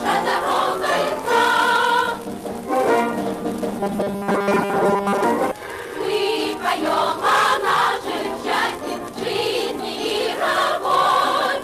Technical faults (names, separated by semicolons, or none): robotic sound from repeated short buffers; skip ahead; jitter buffer speed-up